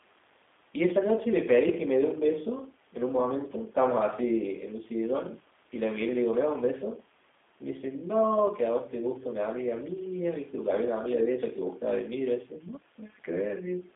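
From start to finish the speech carries G.729 codec damage, plainly audible: a rough, buzzy, synthetic quality from pulse-based resynthesis, consistent with 8 kbit/s G.729A. A spectrogram shows energy confined between 250 Hz and 3.6 kHz, with blank bands above and below.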